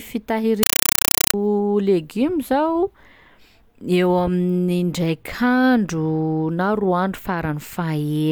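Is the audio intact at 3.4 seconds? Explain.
Yes, the speech at 3.4 seconds plays through intact, with no dropout, click, distortion or other fault at that moment.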